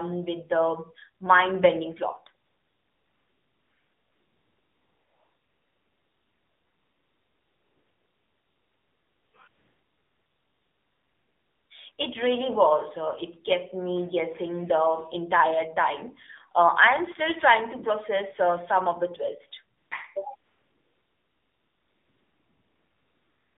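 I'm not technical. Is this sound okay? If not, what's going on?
No. The whole clip has gone through the AMR narrowband mobile codec, the speech system used for older mobile phone calls. It keeps only a narrow slice of sound, roughly 200 Hz to 3.7 kHz, so everything sounds thin and boxy. It also squeezes the voice into very little data. That damage is plainly audible: the speech sounds buzzy and somewhat artificial, like a weak phone line.

You will also hear AMR comfort noise. During these stretches the phone decided nobody was talking and stopped sending speech. The receiving end filled the gap with smooth, artificial hiss instead of the real background. This happens from 2.46 to 9.34 s, 9.48 to 11.70 s, 11.92 to 11.98 s, 19.78 to 19.92 s, and from 20.36 s to the end. Listen for the background sound switching in and out.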